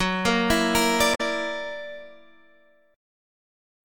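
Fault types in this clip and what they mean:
Damaged data in a compressed stream: a short stretch of the encoded data arrived corrupted, so the decoder could not read those frames correctly, lost its place in the stream and had to hunt for the next valid frame header before normal decoding resumed. In this clip it is heard as a brief glitch from 1.11 to 1.21 s, roughly a tenth of a second in which the sound is disrupted before it recovers.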